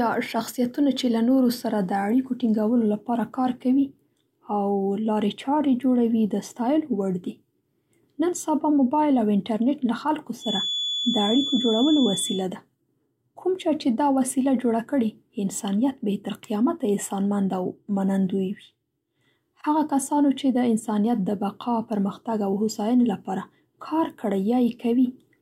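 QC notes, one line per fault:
10.37–12.47 s, feedback whistle: a thin, steady tone at 3.4 kHz sits a few decibels under the speech, swelling and fading slowly in level. Likely a loudspeaker-to-microphone loop held right at the edge of instability, so one frequency rings on without building up.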